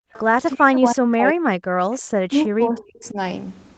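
A speech clip carried over a call link whose audio stops at 8 kHz, which fits a low-bitrate Opus stream. From 0.0 to 0.13 s the background is gated by the echo canceller: the room sound falls by about 40 dB for roughly 0.15 s, seen as a near-empty gap in the spectrogram's noise floor. At 0.13–0.21 s and 1.91–2.00 s a faint echo leak appears, a copy of the sound delayed by 323 ms and some 25 to 30 dB down, showing as a weak ghost of earlier spectral patterns, likely from a loudspeaker echo the canceller did not fully remove. From 0.55 to 1.82 s and 2.24 to 3.17 s there is speech suppressed in double talk, with the voice dipping by up to roughly 40 dB and 30 dB. In the waveform the envelope is chopped into low stretches, likely while the other side talks.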